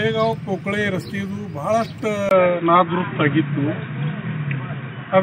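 At 2.29 s the sound drops out for 20 ms. It then returns duller and boxier, with nothing above 3.8 kHz. The level shifts by around 5 dB, and a new noise floor sits roughly 45 dB down. The likely cause is an input switched to a poorer device.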